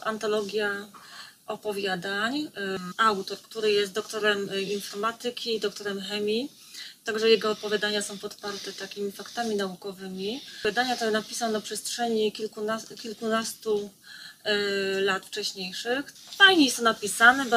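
At 2.90 to 2.92 s, compressed frames are skipped. Roughly 150 ms of audio vanishes, about seven frames of 23.2 ms, so the sound jumps ahead.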